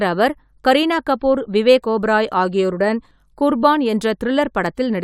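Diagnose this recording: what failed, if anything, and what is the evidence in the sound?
Nothing failed in this speech recording, and no stage of the signal chain leaves an audible trace. There is no evidence in the sound that points to any point of failure.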